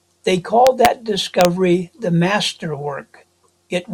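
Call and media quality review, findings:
Integer overflow on speech peaks, 0.67–0.86 s and 1.41–1.45 s: violent cracks, not flattened tops like clipping. Gain stage pushed about 2 dB, then about 1 dB, past full scale; unclamped integer sum wraps peaks to opposite sign.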